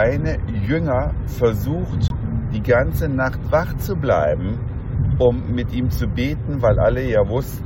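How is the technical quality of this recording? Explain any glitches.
The recording has one clear glitch: a corrupt frame muted dropout from 2.08 to 2.14 s. For about 56 ms, roughly two compressed frames' worth, the decoder rejected damaged data and the player substituted silence. The sound cuts off abruptly and returns without any shift in timing. A waveform shows a flat, near-silent gap with sharp edges, and a spectrogram shows a narrow, fully blank vertical band across all frequencies.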